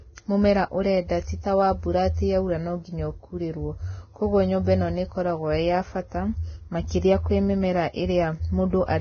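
Throughout, the speech is heavily hissy and grainy with nothing above 6.5 kHz, likely Vorbis compression at a very low bitrate turning treble detail into noise.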